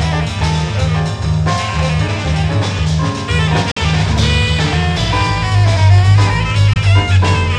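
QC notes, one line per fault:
3.71–3.78 s and 6.73–6.77 s, Bluetooth dropout: the output cuts to silence and the sound returns further along, as if it had kept playing through the gap. That skip forward, rather than a pause that picks up where it stopped, is what sets it apart from a plain buffer underrun. The first hole loses about 46 ms, which fits two lost packets; the second loses about 23 ms, which fits one. The likely cause is packets arriving too late at the headphones.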